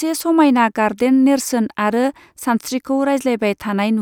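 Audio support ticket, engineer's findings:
No audible faults found on this speech clip.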